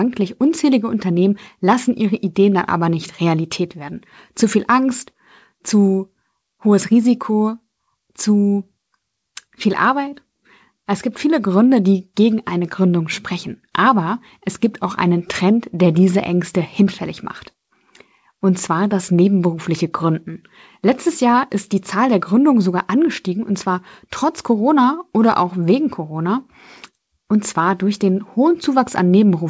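No faults found in the speech; the call path is working normally, with nothing above 8 kHz, which fits a G.722 wideband link.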